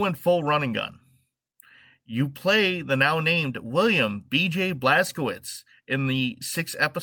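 Speech recording with no audible technical faults.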